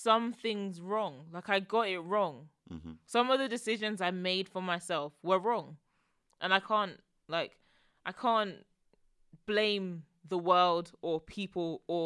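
Nothing here stands out as a technical fault, and the speech just runs on its way without any glitch, dropout or odd noise cropping up along the way.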